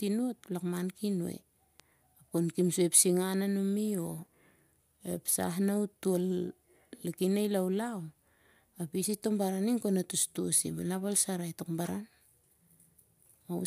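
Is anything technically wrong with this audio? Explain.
Yes, one thing. At 1.80 s there's a bit error spike: a single flipped bit throws three consecutive samples off by a power of two before they snap back. You hear it as a brief, bright tick, about -29 dBFS, spread across the spectrum and unrelated to the speech.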